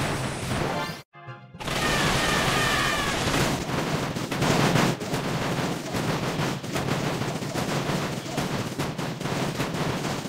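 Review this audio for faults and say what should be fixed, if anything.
A sudden gain jump runs from 4.42 to 4.94 s, where the level steps up by about 5 dB at once, likely from a gain setting applied without a ramp. Unlike compressor pumping, the background noise rises with the sound instantly, with no gradual attack or release. Applying gain changes through a short ramp over a few milliseconds would prevent the step.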